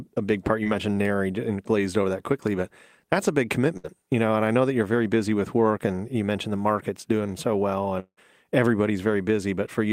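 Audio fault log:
0.63–0.67 s, short concealed packet loss: Just after "a big part you", about 20 ms of the call arrived too late for the decoder. The receiver bridged the hole with roughly 19 ms of synthetic continuation, extending the preceding sound from its last pitch or as shaped noise, then blending back into the real signal. Because the patch is so brief, it comes across as a small smear or wobble rather than an audible gap.
3.77–3.86 s, burst of packet loss: Between "but that's a big" and "you know", about 60 ms of consecutive audio was lost. The receiver covered the gap with about 64 ms of concealment, stretching the last sound outward and lowering it as the gap went on, so it turns into a short held buzz or fading hiss. When real audio returns, it picks up further along, and the material that fell in the gap is simply absent.
8.00–8.19 s, long network dropout: After "market's doing so well", roughly 180 ms of audio is missing. 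The decoder fills about 173 ms, first extending the last sound and fading it as a buzz or hiss, with the last roughly 70 ms of that fill left as near-silence before the signal resumes further on. A stall this long, with concealment running out into quiet, most likely comes from a network interruption rather than isolated packet drops.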